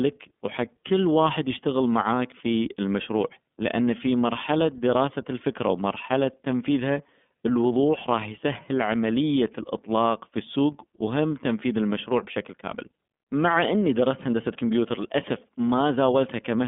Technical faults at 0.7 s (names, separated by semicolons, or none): iLBC codec